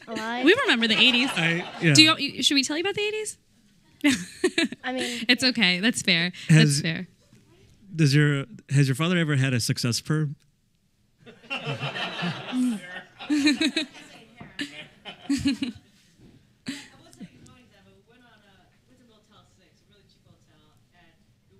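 Nothing in the audio stood out as a technical problem on listening.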